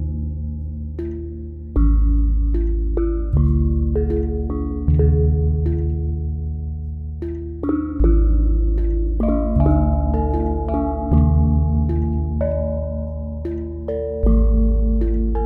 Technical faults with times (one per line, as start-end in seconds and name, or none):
none